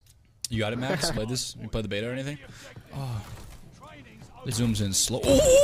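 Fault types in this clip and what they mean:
Compressed frames skipped: three brief jumps where the sound skips ahead roughly 100 to 200 ms, as whole 23.2 ms frames go missing or are refused by the decoder.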